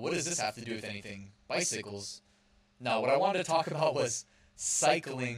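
Channel delay (doubling) runs from start to finish: one channel arrives 40 ms behind the other, and when the two are summed to mono, the late copy sits at equal level just after the original, so the speech sounds doubled, with a short slap trailing every syllable.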